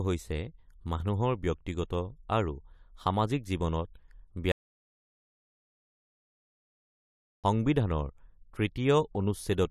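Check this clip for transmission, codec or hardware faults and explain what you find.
There's one fault here: an audio dropout to silence from 4.52 to 7.44 s, where the speech cuts to silence for about 2.9 s, no room tone at all. Likely the input link or device dropped while the recorder kept writing.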